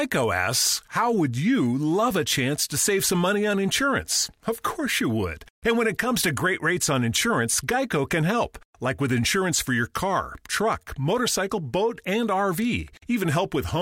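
Speech recording with no audible technical faults from beginning to end.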